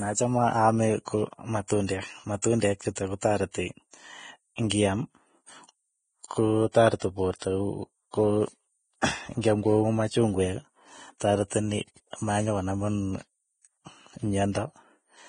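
Throughout, the speech stops dead at 9.7 kHz, a flat spectrogram ceiling, with grainy, hissy treble and blurred attacks, likely from Vorbis compression at a low bitrate.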